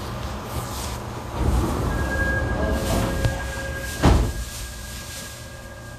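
An everyday sound recording that stays hissy and grainy throughout, with roughened tones, smeared attacks and nothing above 14.2 kHz, likely Vorbis compression at a low bitrate, around 36 kbps.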